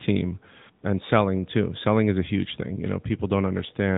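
Throughout the speech, the signal has passed through the AMR narrowband mobile codec, the AMR-NB speech coder used on 2G and 3G phone calls. It rebuilds the voice from a vocal-tract model excited by a handful of pulses per subframe, and its mid-range quality fits the 10.2 kbps mode. Nothing above about 3.8 kHz survives, so the voice sounds muffled and boxy, with a plainly audible buzzy, synthetic edge.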